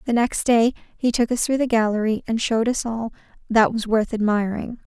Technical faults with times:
none

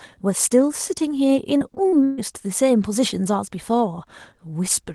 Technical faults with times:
1.57-2.19 repeated packet loss (robotic sound)

